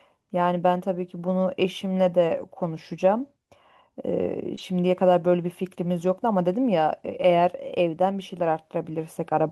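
At 4.55 s a short concealed packet loss appears. About 20 ms of the speech stream arrived too late for the decoder, so the receiver filled roughly 19 ms by extending the last sound it had, then cross-faded back into real audio by 4.59 s. It is heard as a tiny smear or wobble.

Overlapping the end of that patch, from 4.57 to 4.59 s, is a lost packet rebuilt from error correction. One packet was missing, but the following packet carried a low-bitrate backup copy, which the decoder used to rebuild 20 ms with no gap. That stretch sounds rougher and noisier. On a spectrogram the band shows a haze of broadband noise before full detail returns at 4.59 s.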